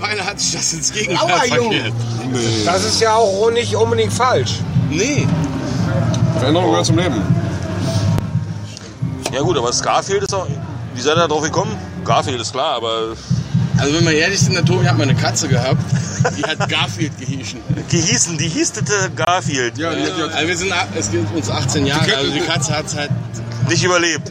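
The audio drops out twice, at 10.26 s and 19.25 s, each a block of digital silence about 23 ms long. The output buffer likely wasn't filled in time, which fits a 1024-sample buffer, so you hear a short little hole each time.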